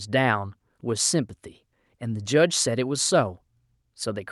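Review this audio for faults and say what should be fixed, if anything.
Nothing in the speech recording needs fixing, as the signal shows no technical faults at any point.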